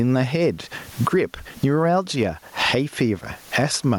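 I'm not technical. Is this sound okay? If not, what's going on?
No, there's gain pumping from start to finish. The sound gets shoved down whenever the speech gets loud, so the level keeps breathing in big swings. Likely cause: the mic gain is set far too high and a fast limiter keeps clamping it.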